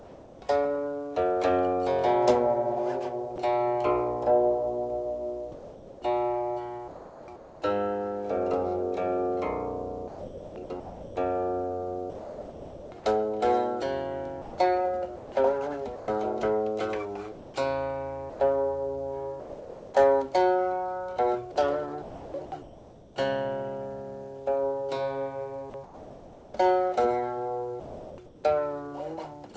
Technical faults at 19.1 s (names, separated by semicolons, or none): sound chopped by the voice detector